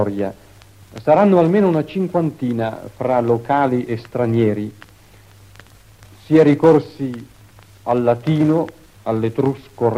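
No technical faults can be heard anywhere in the clip. The sound stays consistent throughout, with no moment that stands out as a problem.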